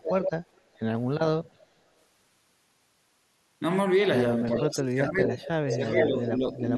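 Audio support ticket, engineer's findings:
Echo leak, six spots: 0.00–0.31, 0.54–0.79, 1.45–1.51, 4.55–4.63, 5.23–5.50 and 5.69–6.30 s. Delayed copy of the far-end speech at roughly 420 ms, level all over the place: about -40 and -30 dB in the quiet bits, about -10 to -5 dB elsewhere, and about level with the speech in the last one. Likely a speakerphone endpoint whose echo canceller isn't fully converged, so loudspeaker pickup gets sent back.

Speech suppressed in double talk, twice: 4.61–5.37 s, near-end speech ducked by about 25 dB at worst, and 5.69–6.73 s, a milder dip of about 5 dB, each around 0.7 s in total. Both overlap the echo bursts. Likely the canceller can't tell local talk from echo during overlap and suppresses everything, so the talker gets clipped.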